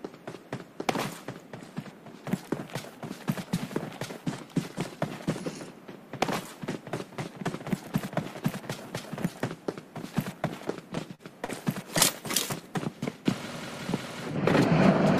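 Short concealed packet loss hits the audio four times, at 10.95–10.99, 11.15–11.21, 11.45–11.50 and 11.98–12.02 s, losing 20 to 40 ms each. The receiver covers the gaps with extended sound, so they come out as brief smears rather than silent dropouts.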